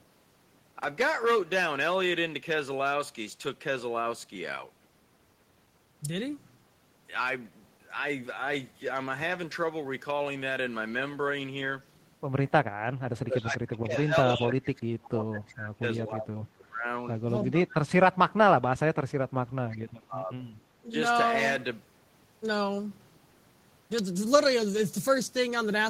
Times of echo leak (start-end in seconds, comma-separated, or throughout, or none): 19.70-19.77